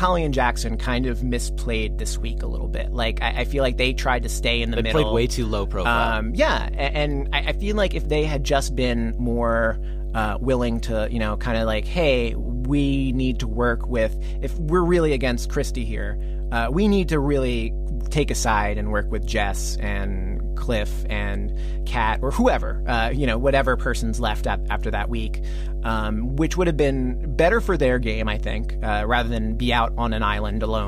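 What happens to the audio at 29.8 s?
At 29.8 s the speech sits on top of mains hum, a steady low tone at 50 Hz that runs through the whole clip rather than starting or stopping at this moment. Its level is roughly equal to the speech itself, so the hum is as prominent as the talker here. The mechanism is power-line coupling into the signal path, through either a ground loop or a nearby transformer, which puts the 50 Hz supply frequency directly into the audio.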